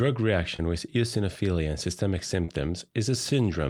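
At 0.56 to 0.60 s, just before "with eosinophilia and systemic", and again at 2.45 to 2.49 s, right after it, short concealed packet loss leaves brief smeared wobbles where late audio was patched by extending the preceding sound, not the silent gaps or hard clicks of a plain dropout.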